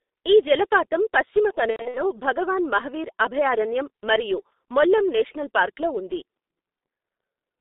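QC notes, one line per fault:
throughout: G.723.1 codec. The speech is muffled and hoarse, with blurred consonants and a band that stops near 3.7 kHz at the top and around 250 Hz at the bottom. The damage is heavy: at 6.3 kbit/s the codec squeezes the voice into 30 ms frames and rebuilds it from a coarse, slowly updated model of the vocal tract, so fine detail and crisp onsets are lost and the timbre turns rough and narrow.
1.70 to 2.02 s: VoIP packet loss concealed by the speech codec. Right after "ఈ జలపాతం పశ్చిమ" the speech smears into a buzzy, fading tone and coloured noise before recovering into "భగవాన్ మహావీర్ అభయారణ్యం మరియు". About 180 ms of audio went missing in gaps spread over roughly a quarter of a second, the longest run 90 ms; the decoder stretched its last pitch and filter while lowering the level, and because each frame leans on the previous one, the voice stays weak and distorted briefly after the gaps end.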